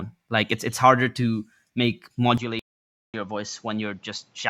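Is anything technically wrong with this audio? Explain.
Yes, there are two faults.

Input switched to a poorer device, from 2.38 s to the end, right after "it's harder to make": the sound turns duller and cuts off above 7.6 kHz, drops about 5 dB, and gains a noise floor about 35 dB down, with no gap. The likely cause is recording moving to a narrower-band microphone.

Stream reconnect, from 2.59 to 3.16 s: the connection dropped, leaving 0.54 s of silence, and a fresh decoder resumed the audio roughly 0.4 s later, skipping material.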